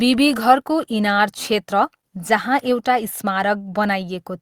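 No technical faults can be heard anywhere in this speech recording. Nothing in the audio calls for a time mark or an explanation.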